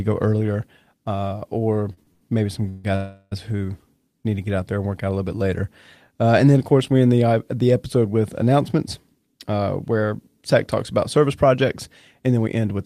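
Right after "go earlier uh or", from 1.93 to 2.86 s, there's repeated stalls (stutter): five late-packet gaps, the longest 147 ms, get filled with stretched sound, so speech drags without losing anything.

From 2.96 to 3.33 s comes a call audio freeze. The last sound hangs as a fading buzz for about 360 ms, with a brief dropout, likely from packets held up in transit.

After "uh the episode with", from 8.78 to 12.79 s, jitter buffer speed-up trims tiny pitch-period slices, roughly a fifth of a second total, so speech runs about 5% faster and slightly hurried.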